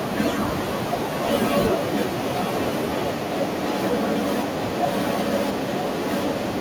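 Echo leak at 0.58 to 0.8 s and 2.16 to 2.74 s: a copy of the speech returns about 0.95 s late, roughly 10 dB quieter, likely from a loudspeaker's echo canceller leaving residue.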